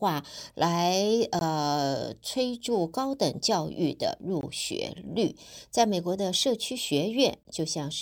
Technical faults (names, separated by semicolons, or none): gap between chunks